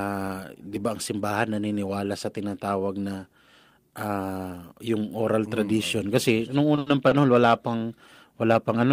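A speech clip with a short stall from a late packet, three times: 6.75–6.79 s and 6.79–6.88 s after "mm tradition kasi noong", then 7.08–7.13 s before "wala pang". The jitter buffer ran dry, so sound is held for 20, 70 and 30 ms. Nothing is lost.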